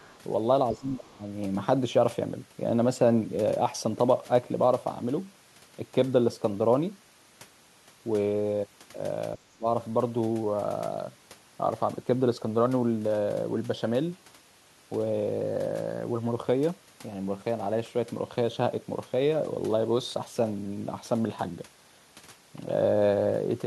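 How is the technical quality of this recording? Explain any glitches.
The recording has three short echo-control faults: a faint leak at the very start and two brief speech dropouts.

From 0.00 to 0.19 s, a faint second voice is audible, roughly 30 dB below the main speech. This is other side's voice leaking through, likely because the far end played on a loudspeaker and the echo canceller left a residue in the microphone signal.

From 0.72 to 1.22 s and again from 9.36 to 9.66 s, the talker's level sinks sharply, by around 20 dB and then around 25 dB. This is speech suppressed in double talk, likely the echo canceller attenuating everything when both sides spoke at once.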